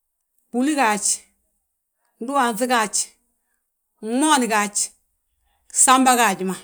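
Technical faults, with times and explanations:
No technical faults can be heard in this speech clip. There is nothing to list with a time or an explanation.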